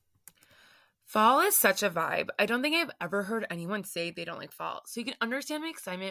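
No dropouts, clicks, distortion or timing disturbances occur anywhere in the recording, and the speech runs without interruption from beginning to end.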